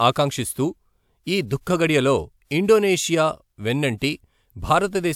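Nothing in the speech stood out as a technical fault on listening.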